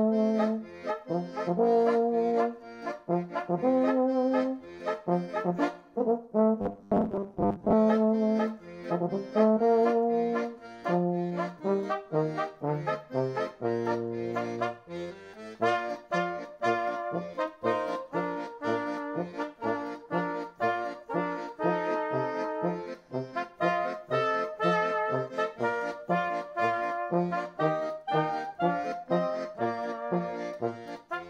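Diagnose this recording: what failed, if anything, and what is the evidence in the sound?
Buffer stage: robotic sound from 6.62 to 7.74 s, a rigid 100 Hz buzz, likely from 10 ms buffers repeated in place of about half the audio.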